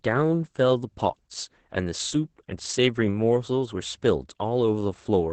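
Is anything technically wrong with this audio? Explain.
Yes. Throughout the speech the audio shows Opus voice compression at a very low bitrate. The codec ran its SILK linear-prediction coder in wideband mode, so the band is cut off with nothing above about 8.7 kHz, and the excitation signal is coded coarsely, which points to a rate around 10 kbps. The damage is heavy: the speech sounds muffled and dull, with a hoarse, slightly robotic texture.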